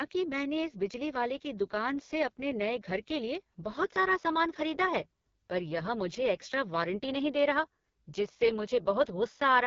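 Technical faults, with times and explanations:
Throughout: AMR wideband (HD Voice) codec. Speech sounds rough, raspy and buzzy, with nothing above 7.3 kHz. The vocal tract model and pulse excitation are starved of bits, which fits the lowest rate near 6.6 kbit/s, and the top band is only shaped noise.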